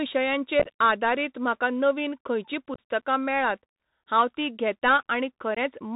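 The whole clip is speech squeezed through a Bluetooth CVSD headset codec, the narrowband link you'd expect at around 64 kbps. Everything above 4 kHz is gone, and there's a grainy hiss under the voice. The codec works by nudging the signal up or down one step per sample. Sharp, loud high sounds outrun those steps and distort, so the s sounds come out scratchy. The damage is plainly audible from start to finish.

On top of that there's unconcealed Bluetooth headset packet loss three times. From 0.60 to 0.68 s, just before "आदारीत म्हाका नवीन खंयचीं", about 38 ms of audio drops out across roughly 68 ms. It goes in small bites of up to 11 ms, about ten packets' worth, and sounds like a crackly chop. From 2.74 to 2.80 s, between "आदारीत म्हाका नवीन खंयचीं" and "मेळात हांव तीं", about 41 ms goes, including one 26 ms hole. Then at 5.55 to 5.58 s a shorter 19 ms gap hits. Nothing fills these holes, so they start and stop abruptly, and the voice comes back briefly quieter.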